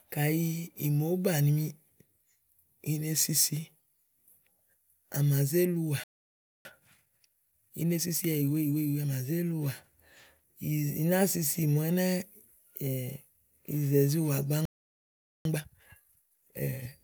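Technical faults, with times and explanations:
6.04–6.65 s and 14.65–15.45 s: playback stall. The speech cuts out mid-flow into silence, for about 0.61 s the first time and 0.80 s the second, before resuming. The player likely ran out of buffered data or had its output thread blocked, so nothing reached the output until it recovered.
6.65–9.09 s and 15.45–16.93 s: time-compressed catch-up. Right after each stall the player trims its backlog by dropping short slices and cross-fading the joins, running at 1.25 times speed and then 1.5 times. The speech sounds rushed but keeps its normal pitch.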